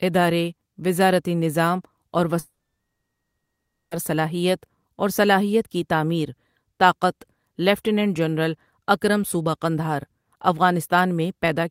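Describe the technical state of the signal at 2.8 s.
At 2.8 s the signal sits inside a long network dropout, likely caused by audio packets failing to arrive from 2.39 to 3.93 s. About 1.5 s is lost: after "ادارے وزارتی نظام اور", a brief fading buzz gives way to roughly 1.4 s of silence, and the audio resumes at "صلاحیت اور صلاحیت کی".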